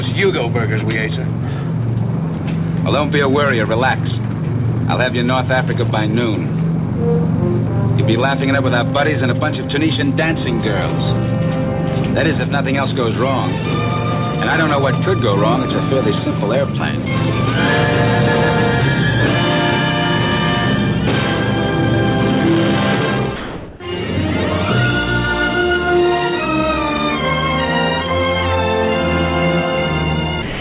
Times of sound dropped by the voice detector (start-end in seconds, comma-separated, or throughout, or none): 23.36-23.80, 30.42-30.60